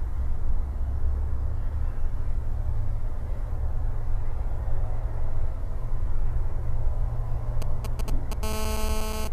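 From 7.62 to 8.34 s, a nearby 2G phone exchanging signalling with its network sends brief clusters of radio bursts that the audio circuit rectifies. The result is GSM signalling bursts: a galloping dit-dit-dit of short 216.7 Hz buzzes, roughly 10 dB below the sound.

From 8.43 to 9.28 s, the phone moves into a call and transmits in bursts 216.7 times per second, each pulse again rectified. This GSM phone buzz is a steady, hard, raspy 217 Hz tone rich in harmonics, about 10 dB below the sound and unrelated to it.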